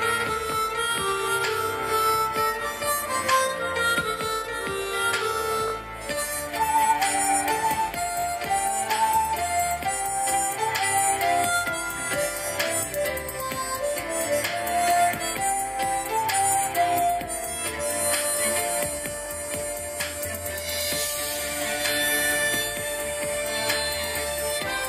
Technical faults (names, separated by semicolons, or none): repeated buffer